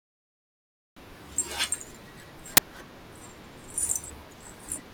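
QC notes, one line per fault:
2.57 s, uninitialised buffer: a single block of about 10.7 ms, which fits a 512-sample buffer, plays leftover memory instead of speech, giving a sudden, loud crack. The samples are arbitrary stale values, not a signal, so they jump abruptly away from the speech waveform. On the waveform it appears as a dense patch of arbitrary values cut off sharply at both edges; on the spectrogram, a thin broadband vertical stripe.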